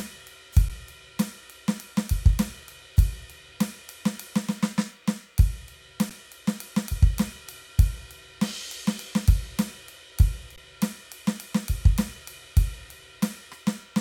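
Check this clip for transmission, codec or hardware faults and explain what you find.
The music has three brief dropouts, all of the same kind.

Underrun with held sample, at 0.69 s, 6.10 s and 10.56 s: the output buffer ran dry and the converter froze on its last value, so the waveform flattens rather than falling to silence. The first two stalls last 11.6 ms, which fits a 512-sample buffer; the third lasts 16.4 ms. Each is a short, nearly clickless hitch, ending softly because playback resumes exactly where it halted.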